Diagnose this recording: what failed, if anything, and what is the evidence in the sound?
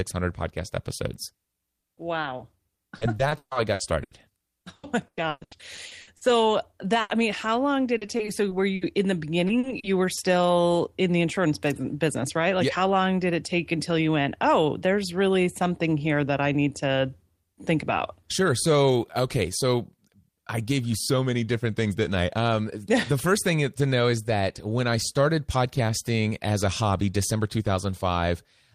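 Network: repeated packet loss (robotic sound) at 1.43–4.13 s after "podcast episodes", 4.61–6.23, 7.97–8.83 and 9.47–10.19 s, where gaps up to 140 ms are patched by repeating sound. A spectrogram shows smeared, stepped harmonics.

Network: burst of packet loss at 7.01–7.11 s, before "I mean how long". About 80 ms is lost and bridged by a fading continuation, which shows as a decaying smear before the audio jumps ahead.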